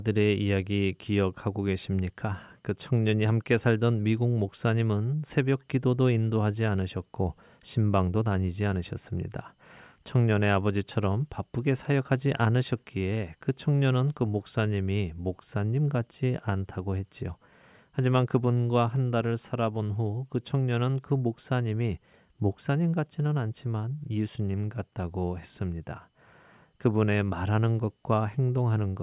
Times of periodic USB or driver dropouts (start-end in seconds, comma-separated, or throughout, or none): none